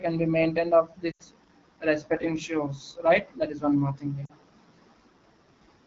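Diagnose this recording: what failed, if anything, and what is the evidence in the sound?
Codec stage: AMR wideband (HD Voice) coding at 8.85 kbit/s leaves the speech rough and raspy throughout. A spectrogram shows smeared harmonics and noise-like energy filling 6.4 to 7 kHz.

Network stage: lost AMR speech frames at 1.11 to 1.22 s, about 80 ms, and at 4.26 to 4.32 s, about 40 ms. The decoder stretches the last sound and fades it quickly, which fits dropped 20 ms frames. The waveform shows decaying gaps.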